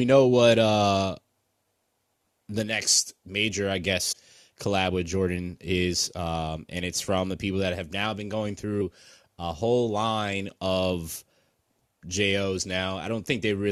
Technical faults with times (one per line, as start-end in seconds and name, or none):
4.11-4.13 damaged data in a compressed stream
8.80 damaged data in a compressed stream